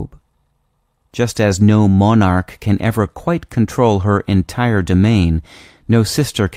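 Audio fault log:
No faults heard anywhere in this speech recording.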